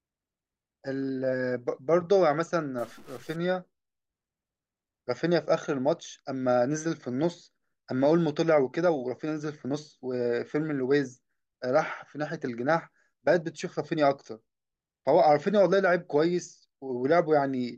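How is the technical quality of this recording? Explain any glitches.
One glitch stands out in the speech. Stuck bit, 2.79 to 3.36 s: the grainy noise and hiss filling quiet moments point to one data bit likely frozen, offsetting values by about -50 dBFS.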